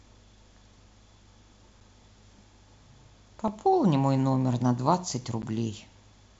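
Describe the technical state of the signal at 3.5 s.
At 3.48 s there is a block of digital silence lasting about 2.4 ms, where a short run of samples drops to silence, most likely because the output buffer was not filled in time. The abrupt cut out and back in gives a single sharp tick over the wideband speech. On the waveform it appears as a brief near-flat line; on the spectrogram, as a thin vertical broadband stripe.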